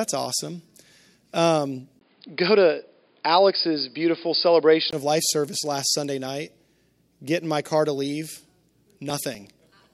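At 1.99 s the speech abruptly turns dull and boxy after a 20 ms gap, with nothing above 5 kHz and a faint new noise floor about 45 dB down, at similar loudness. This is likely an input switched to a poorer device. The spectrogram shows a hard ceiling at 5 kHz until the sound clears at 4.93 s.

From 8.37 s to 9.84 s, regular ticks every 0.123 s point to periodic USB or driver dropouts. Each skips roughly 2 ms of audio, about fifteen in all. In the waveform they appear as evenly spaced splices, and on the spectrogram as thin vertical clicks.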